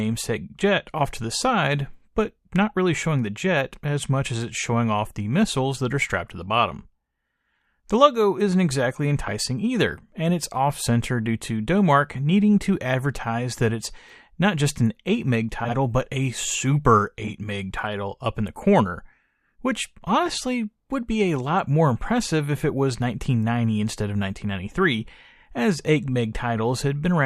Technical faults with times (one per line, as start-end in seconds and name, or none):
9.26-9.30 frames out of order
15.64-15.75 frames out of order
17.24-17.32 frames out of order
20.27-20.30 frames out of order
24.39-24.42 frames out of order